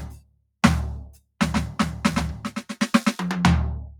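Across the whole music clip the level pumps and flutters, held tones thinning while attacks punch through, swinging by around 10 dB. A noise suppressor meant for speech is applied to the music, mistaking sustained tones and tails for noise and repeatedly pulling them down.

From 0.0 to 0.61 s, and again from 1.09 to 1.39 s, the sound sinks, dropping by as much as about 21 dB. Here the suppressor treats the sound itself as noise, clamping it down harder than the surrounding material.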